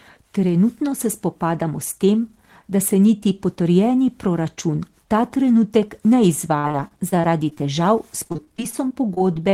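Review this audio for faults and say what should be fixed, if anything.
Repeated packet loss (robotic sound) from 6.59 to 7.61 s and again from 8.23 s to the end: audio packets kept arriving late or not at all, gaps up to 41 ms. Each hole was patched by stretching the previous sound, leaving choppy speech with pieces missing. To prevent it, steady the network path and give the jitter buffer more headroom so packets arrive in time.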